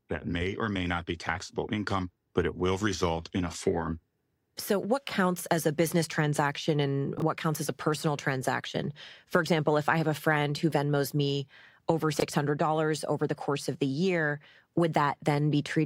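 A 20 ms block of audio was delivered late and played out after the blocks meant to follow it, which is the fault known as chunks out of order. At 7.18 to 7.22 s one chunk arrives a single slot late, and at 12.14 to 12.22 s one lands three chunks behind. Nothing is missing, but each swap leaves hard joins, so the speech briefly sounds jumbled at both points.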